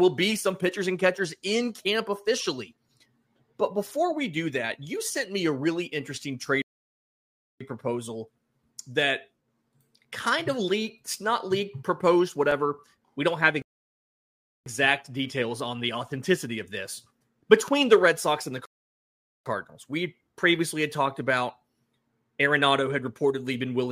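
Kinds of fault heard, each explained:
Rebuffering stall: The player ran dry of downloaded audio and simply waited for more, so the sound drops to silence and then picks up exactly where it left off. Nothing goes missing; it just adds time. You get three of them here: 6.62 to 7.61 s (about 985 ms), 13.62 to 14.66 s (about 1.04 s) and 18.66 to 19.46 s (about 803 ms), roughly 2.8 s of extra waiting altogether.
Block of digital silence: A run of zeros gets played in place of the real audio, either because the output buffer wasn't filled in time or because a calculation produced invalid numbers. The cut is abrupt, with no fade. Here it's a single hole at 12.51 s, only about 2.9 ms long, which fits a 128-sample buffer. That's far too short to hear as silence, so it comes across as a tick or a quick dip.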